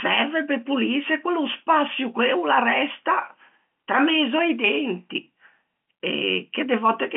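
No technical faults are audible.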